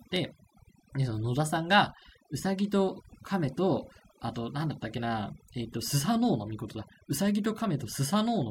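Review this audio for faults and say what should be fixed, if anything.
Overdone noise removal runs throughout: bands near the noise estimate are cut individually, leaving twinkling specks. A noise gate would mute everything at once instead. Prevent it by using gentler reduction strength on the noisy recording.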